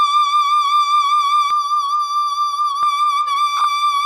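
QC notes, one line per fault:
1.51–2.83 s, channel delay (comb filtering): one channel runs late by under a millisecond before the mono sum, notching from about 700 Hz upward, so the music turns hollow and phasey.
3.57–3.65 s, lost LE Audio frames: about 40 ms of audio dropped across 80 ms, which fits four 10 ms frames, the decoder refilling the gaps with noise-signed spectrum, so tones smear briefly.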